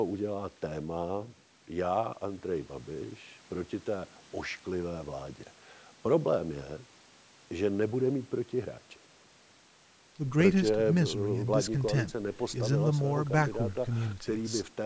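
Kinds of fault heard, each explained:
Nothing here counts as a fault; the speech has simply been through a call's microphone processing, which trims the deepest bass and leaves nothing above 8 kHz, and that's just how such a call path normally sounds.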